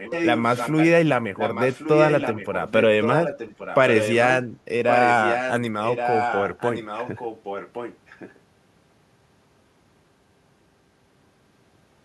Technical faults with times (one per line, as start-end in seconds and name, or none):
0.00-0.87 echo leak
1.36-4.28 echo leak
4.88-5.54 echo leak
5.84-8.39 echo leak